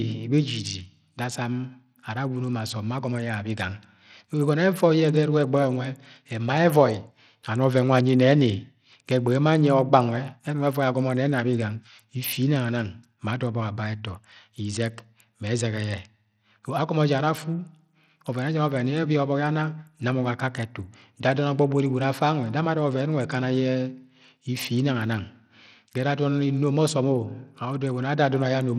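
From start to finish the speech carries plainly audible damage of the kind that Bluetooth SBC compression leaves, likely from a link running a small bit pool. The encoder splits the signal into a few wide sub-bands and spends too few bits on the top ones, so the treble thins out and flickers in and out, while coarse quantisation adds a gritty grain and aliasing to the voice. The degree of damage fits a low rate around 80 kbps.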